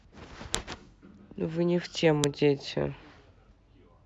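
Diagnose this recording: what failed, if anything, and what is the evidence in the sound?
Storage or file-joining stage: a file header played as audio produces sharp, loud clicks at 0.55 s and 2.24 s, where WAV pieces were joined with headers left in. Those header bytes decode as samples, showing as a brief spike on the waveform and a full-height vertical line on the spectrogram.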